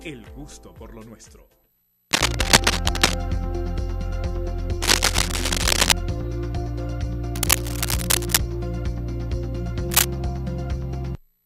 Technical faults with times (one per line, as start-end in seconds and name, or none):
2.11-3.18 cable scratch noise
4.82-5.93 cable scratch noise
7.35-8.37 cable scratch noise
9.90-10.05 cable scratch noise